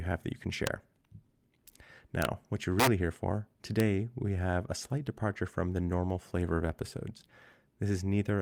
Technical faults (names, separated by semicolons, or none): integer overflow